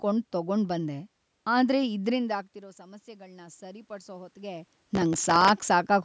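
Speech, with two faults. From 2.35 to 4.71 s, automatic gain rising lifts the level by about 7 dB after the input fell by about 18 dB when the talker moved back; voice and room noise swell together, unlike a talker simply moving closer. From 4.91 to 5.49 s, processor overload crackle adds a gritty tearing: a few dozen missed buffers of a millisecond or two each replay stale audio, giving steady grit rather than one isolated click.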